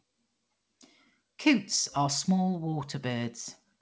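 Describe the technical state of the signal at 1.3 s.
At 1.3 s the signal is intact, with the speech coming through the call path cleanly and its band stopping at about 8 kHz, as expected of a wideband call codec such as G.722.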